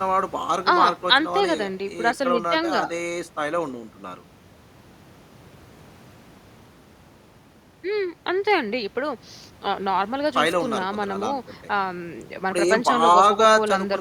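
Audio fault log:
No fault is heard in this speech clip.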